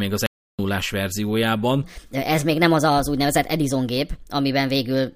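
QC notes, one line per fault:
0.26–0.59 s, audio dropout to silence: the speech cuts to silence for about 324 ms with no room tone left, unlike a gate or fade. The input was likely lost.
1.84 s to the end, section at the wrong speed: the speech runs 1.26 times fast, hurried and about four semitones higher, because pitch shifts with tempo. It was likely played against the wrong clock.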